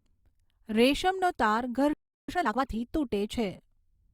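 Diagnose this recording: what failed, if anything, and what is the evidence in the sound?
The playback stage stalled, most likely because the player's buffer ran dry or its output thread was held up. The speech cuts off mid-flow at 1.93 s and the output stays silent until 2.29 s, a gap of about 0.35 s. The sound then resumes, which points to the playback path recovering after the interruption, not to damage in the recording itself.

Right after the stall, the player performs a time-compressed catch-up to work off the backlog that built up during the gap. From 2.29 s to 2.63 s the speech runs at twice its normal rate while keeping its original pitch. This happens because the player removes short slices of audio and cross-fades across the joins, so the delayed material plays out faster and realigns with the expected timeline.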